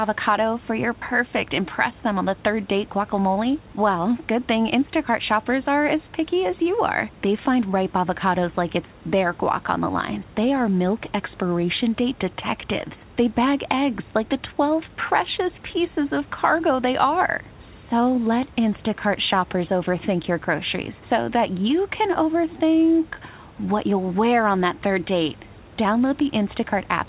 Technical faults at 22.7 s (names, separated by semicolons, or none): none